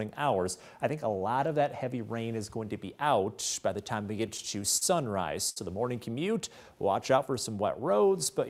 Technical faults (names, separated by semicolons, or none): repeated stalls (stutter); short stall from a late packet